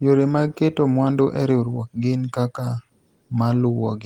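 No technical faults are audible.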